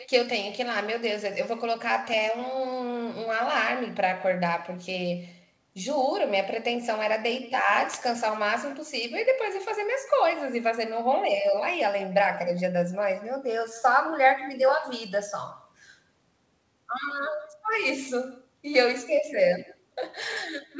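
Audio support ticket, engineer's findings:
Echo with no canceller, throughout. Each phrase returns as a quieter, thinner copy about 20 dB down, roughly 150 ms late. The far end's loudspeaker feeds its microphone, and no canceller removes it. Band stops at 8 kHz, which fits a G.722 wideband call path.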